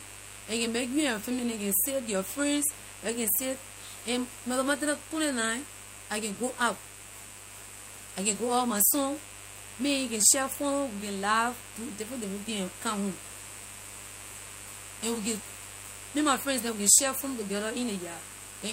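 Under the speech there's a steady, raspy mains buzz running the whole way through, sitting roughly 20 dB below the talker. It's built on 50 Hz, with sharp switching spikes from something like a dimmer or rectifier spraying harmonics up into the kilohertz range.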